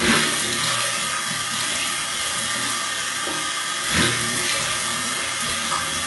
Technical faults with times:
0.00-6.06 HE-AAC compression

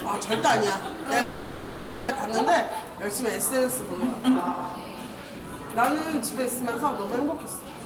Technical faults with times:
1.21-2.12 long network dropout
2.50-4.29 jitter buffer speed-up
4.88-5.79 jitter buffer speed-up
6.42-7.86 jitter buffer speed-up

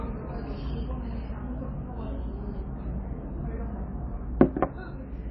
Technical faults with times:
0.00-5.31 MP3 compression

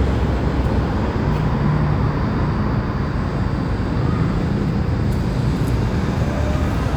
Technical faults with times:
none

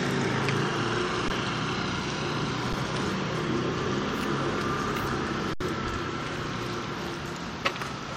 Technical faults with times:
1.28 underrun with held sample
2.73 underrun with held sample
5.53-5.60 underrun with held sample

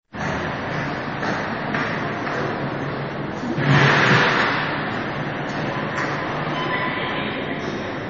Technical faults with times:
0.00-8.09 MP3 compression

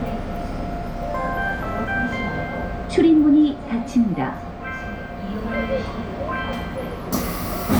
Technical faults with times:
none

